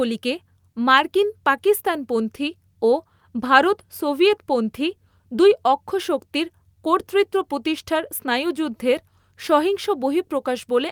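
Nothing stood out as a technical problem on listening to this speech recording.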